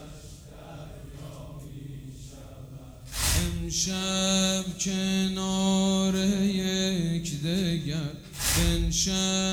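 No technical faults can be heard anywhere in the clip, so there is nothing to describe in time order.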